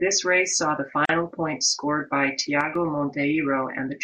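It's a short speech clip with two faults. At 1.05 s, right after "race saw the", a gap at a join of encoded pieces cuts about 39 ms of silence into the speech, with smeared edges, before it picks up at "points scored by". That's what you get when separately encoded pieces are stitched together without trimming the encoder's start delay and end padding. Then, just after "points scored by", from 2.61 to 2.75 s, the level drops by about 6 dB and recovers. That sounds like one channel dropping out, with the mono sum losing half of what both sides shared, which is the likely cause here.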